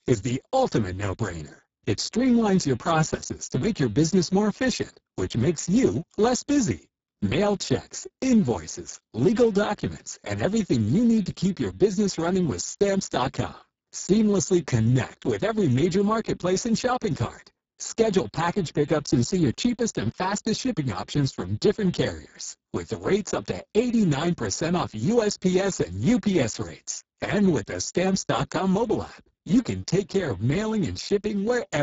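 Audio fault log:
Throughout: Speex codec, speech sounds hoarse, noisy and near-robotic, as heavy CELP coding at a bitrate that fits about 6 kbps starves the excitation, with nothing above 7.7 kHz.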